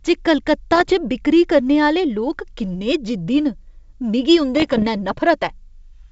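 From 0.72 to 0.93 s, just before "च बिक्करी करने", and again from 4.57 to 4.87 s, the speech breaks into pops and gritty bursts with brief jumps in level. These are bit errors on an ADPCM link, at a low rate of around half a percent, over a G.722 path whose clean band-split sound points to 64 kbit/s. Each flipped bit throws off the decoder's adaptive step size and predictor, so the damage rings on for milliseconds. Packet loss would leave gaps or smeared repeats, not this crackle.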